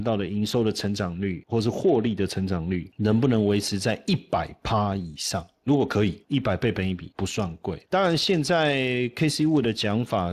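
Throughout, Speex codec damage makes the speech plainly hoarse and noisy, fitting roughly 22 kbps. A spectrogram shows smeared harmonics and an empty band above 15.5 kHz.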